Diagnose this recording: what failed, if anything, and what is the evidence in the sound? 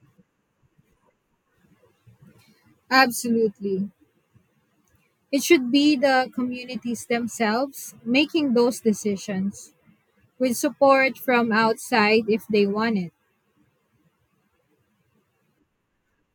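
Nothing failed at any stage here: the speech signal arrives continuous and intact, with no dropouts, level jumps, distortion or timing disturbances anywhere in it.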